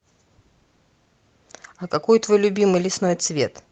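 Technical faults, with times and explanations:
No technical faults are audible; the speech carries the normal sound of a WebRTC call path, with content reaching up to 8 kHz, consistent with Opus at a call-grade bitrate near 32 kbps.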